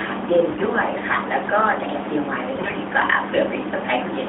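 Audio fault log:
0.50–0.67 s and 2.56–2.78 s, AMR bit errors: two short bursts where the speech turns hoarse, scratchy and gargly while keeping roughly its pitch and loudness. The damage fits corruption of the less protected bits in about eight and then ten 20 ms frames, at a rate of roughly 7 percent. Because those bits were wrong, the excitation pulses are misplaced and the fine gain, pitch and spectral values are off. On a spectrogram the harmonic striations break into noisy smear below the narrowband ceiling near 3.6 kHz. On the waveform the envelope holds its level but turns jagged.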